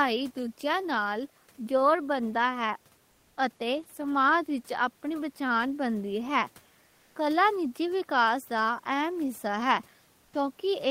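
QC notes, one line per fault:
3.11–3.37 s, comfort noise in place of the background: between "جوڑ بندا ہے" and "اتے سماج وچ اپنی", 260 ms of room tone turns steady and featureless, about 1 dB quieter, likely synthetic fill from Opus DTX.
6.87–7.15 s, comfort noise in place of the background: just before "کلا نجی وکاس دا", 280 ms of real background gives way to flat generated noise about 2 dB lower, likely Opus DTX.
10.25–10.33 s, comfort noise in place of the background: after "حصہ ہے", an 80 ms pause is filled with smooth noise, about 5 dB quieter than the room's own noise, likely Opus DTX.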